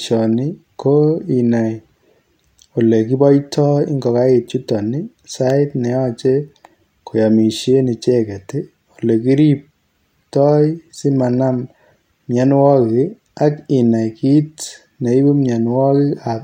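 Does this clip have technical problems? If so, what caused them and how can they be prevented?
No, nothing in this speech recording points to a technical problem, so there is no cause to trace and nothing to prevent.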